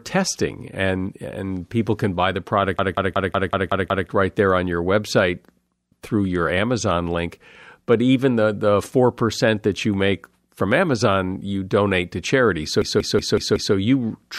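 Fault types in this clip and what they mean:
System hang loop: at 2.79 to 4.09 s, right after "people can buy the", and at 12.82 to 13.75 s, just before "you truly have no", the host stalled while the sound hardware kept replaying its ring buffer. A 186 ms slice repeats 7 and then 5 times, a machine-gun stutter at 5.38 Hz that fits an 8192-sample buffer. Speech resumes at "right there on your" with essentially nothing missing.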